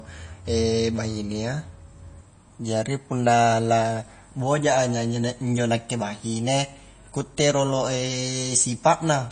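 Throughout, the speech has plainly audible MP3 compression damage, likely at about 32 kbps. Treble stops at 9.3 kHz. Weak detail swirls in and out.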